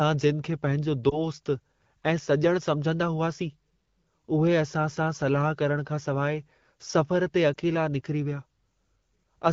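At 1.09 to 1.22 seconds there is a lost AMR speech frame. A single 20 ms frame fails its checksum. The decoder fills the gap by repeating the last good pitch and vocal tract settings at lower gain. The speech briefly dips or warbles. The same lost AMR speech frame fault returns at 7.54 to 7.57 seconds. Again one frame is concealed, giving a short dip. The wideband sound around both gaps is clear, which fits AMR-WB at 12.65 kbit/s.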